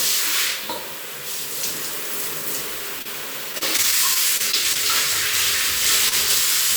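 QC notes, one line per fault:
3.02 to 3.07 s, short concealed packet loss: about 20 ms never arrived, patched from the preceding sound, leaving a brief smear rather than a held or stretched tone.
3.53 to 4.77 s, repeated packet loss (robotic sound): nine separate gaps, longest 29 ms, each patched in turn, giving choppy sound with pieces missing, unlike a single isolated smear.
6.09 to 6.14 s, short stall from a late packet: a packet arrived 26 ms late, so the last sound was held until it came; nothing is lost, only a slightly stretched moment.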